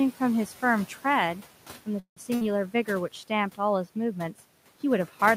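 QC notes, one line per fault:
Throughout: noise suppressor artifacts. The room noise, sitting about 19 dB below the speech, is pulled down by about 12 dB between phrases and swells back under them. The processing works band by band, frame by frame.
1.99 to 2.18 s: call audio freeze. The sound stops and a held tone fills the gap, fading to about 110 ms of silence. Playback then resumes where it left off, about 170 ms late, with nothing lost. Delayed packets and an emptied jitter buffer are the likely cause.
2.35 to 2.44 s: burst of packet loss. Roughly 60 ms of audio never arrives. The receiver stretches the last sound into a brief fading buzz or hiss of about 58 ms. Speech then picks up further along, so that stretch is missing rather than delayed.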